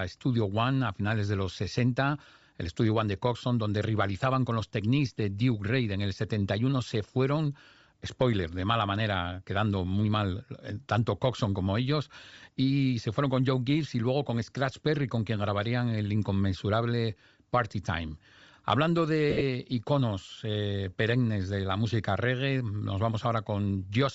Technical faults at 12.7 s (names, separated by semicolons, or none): Bluetooth LC3 compression